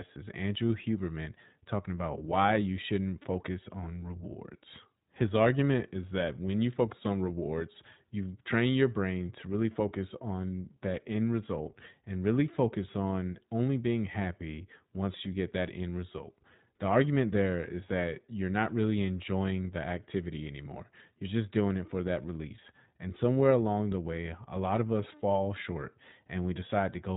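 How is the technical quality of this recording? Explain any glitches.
The recording is limited by one constant codec fault. iLBC codec damage runs throughout: each 20 ms frame is coded independently, cutting everything above 3.8 kHz and leaving the speech audibly rough, thin and synthetic, which fits a rate near 15.2 kbps.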